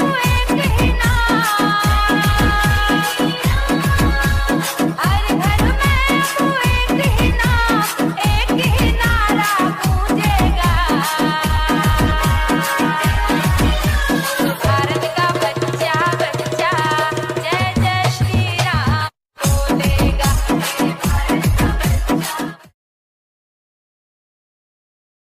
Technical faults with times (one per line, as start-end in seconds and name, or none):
none